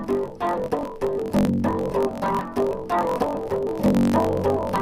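From start to finish the audio carries a steady buzz at about 46.9 Hz and runs roughly 1.12 times too fast while keeping close to its normal pitch. That combination marks a block size mismatch (truncated): one stage writes longer blocks than the next reads, so each block's tail is discarded. The buzz rate fits 1024-sample reads. A plain sample-rate error would raise the pitch along with the speed, and random dropouts would not produce this even, periodic buzz.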